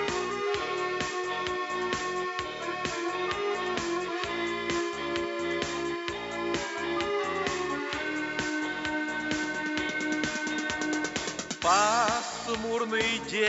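No technical faults are audible.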